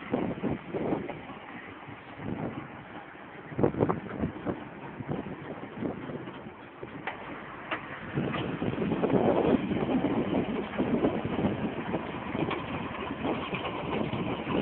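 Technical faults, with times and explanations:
13.52 s, compressed frames skipped: the audio leaps forward, dropping about 150 ms of material at once. Whole blocks of the encoded stream were never decoded, either missing or rejected as corrupt, so playback resumes further on. Each block here spans 23.2 ms, and the gap fits a loss of around seven of them.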